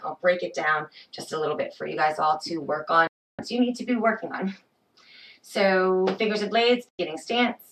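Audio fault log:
3.07–3.39 s and 6.89–6.99 s: digital broadcast dropout. The sound mutes abruptly, fading out in about 3 ms. Silence lasts 312 ms, then 96 ms. Frames failed to arrive intact, so the receiver muted until good frames resumed. Those missing stretches are lost.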